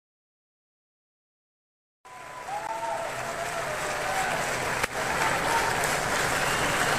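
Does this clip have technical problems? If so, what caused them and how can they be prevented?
Yes. A gap between stream segments appears at 2.67 s: the sound drops out for about 17 ms with abrupt edges on both sides, then carries on exactly where it left off, so nothing is missing, only delayed. The timestamps of two consecutive segments don't quite meet, and the player covers the mismatch with silence. The position fits a boundary between segments roughly 4 seconds long. To prevent it, generate segment timestamps from a continuous sample count so each segment starts exactly where the previous one ends.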